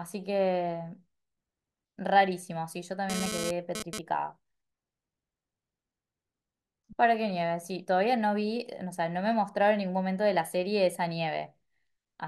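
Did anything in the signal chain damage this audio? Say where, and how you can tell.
Yes. GSM phone buzz in the analogue wiring, 3.10 to 3.99 s: rectified 217 Hz bursts, about 5 dB under the speech, appear as stacked harmonic lines on a spectrogram.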